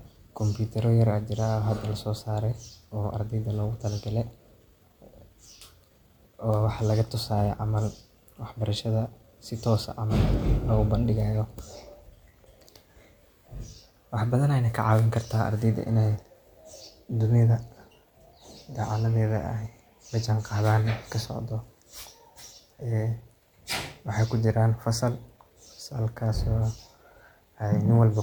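No technical faults are audible anywhere in this recording.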